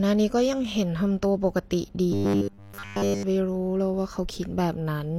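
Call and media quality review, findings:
Robotic sound from repeated short buffers, 2.12 to 3.23 s. Speech collapses into a rigid metallic buzz at 100 Hz, still loosely tracking the words. Likely cause: jitter buffer or playout underrun. Fresh audio arrives too rarely, so the same roughly 10 ms chunk loops in place of the real signal, all of it through the span. The loop period sets the fixed pitch, which fits a 10 ms buffer.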